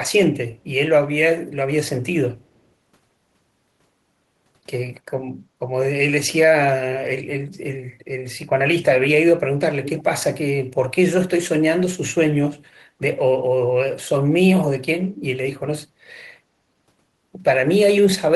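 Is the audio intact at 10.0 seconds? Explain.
No. From 9.84 to 10.03 s there is an echo leak, likely from a far-end echo canceller that failed to remove its loudspeaker's pickup. A faint copy of the speech, about 15 dB quieter, returns 292 ms late as a brief ghostly repeat.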